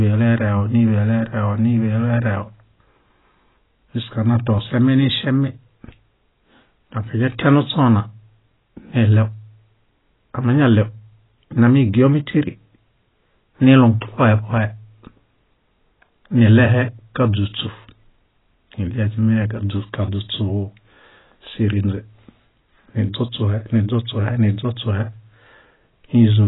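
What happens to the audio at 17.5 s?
At 17.5 s the speech is still carrying the heavy damage that runs through the whole clip, most likely AAC compression at a very low bitrate, which fits about 16 kbps. The encoder has discarded everything above 3.9 kHz and coarsely quantised what remains, so the speech sounds dull and smeared, with a warbling, fizzy edge on sibilants.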